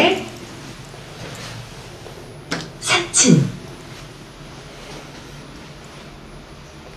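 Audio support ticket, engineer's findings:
Signal path checks out on the everyday sound recording, with level, timing and frequency content intact across the whole capture and nothing found that needs action.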